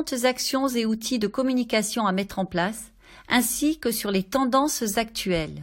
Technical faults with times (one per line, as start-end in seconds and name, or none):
3.30 overlap between stream segments